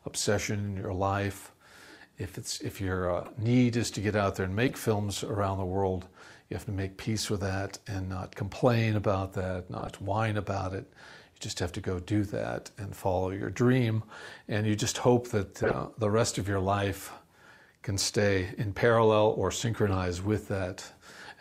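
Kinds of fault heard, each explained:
Corrupt frame decoded: a few compressed frames got corrupted, and the decoder played them anyway, dropping energy at the wrong frequencies. You get five brief chirpy bursts, near 3.25, 4.68, 9.79, 15.63 and 19.88 s, each about a tenth of a second or less. The 15.63 s one is loudest.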